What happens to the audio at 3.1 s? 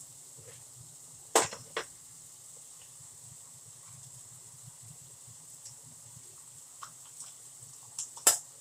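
Nothing goes wrong at 3.1 s; the audio plays through that moment intact, with no dropout, click or distortion.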